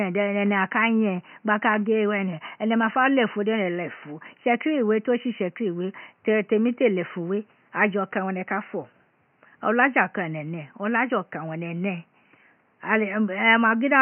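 No technical faults can be heard anywhere in this speech clip. A faint room noise sits in the background, about 43 dB below the speech, and belongs to the recording itself rather than to any fault of the system.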